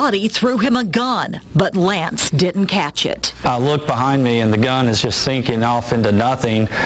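Gain pumping runs through the whole clip. The swing is roughly 10 dB. Loud and soft parts sit closer in level than they should, so the sound feels squashed. The likely cause is input gain set far too high, with a fast limiter or compressor clamping down on each peak. The band stops at 8 kHz, as expected for a call path.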